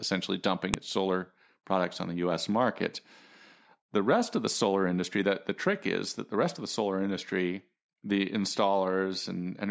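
A speech recording with a single sharp, loud click at 0.74 s, just before "its solar products on". This is a file header played as audio: where separate WAV pieces were joined or streamed, the header bytes of the next piece were left in and decoded as samples. On a waveform it shows as a narrow spike; a spectrogram shows a thin vertical line spanning all frequencies.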